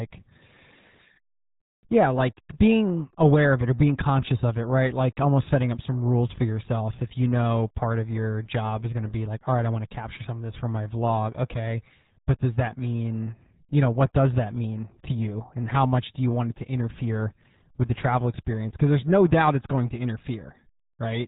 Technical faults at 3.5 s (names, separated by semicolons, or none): RealAudio 14.4 codec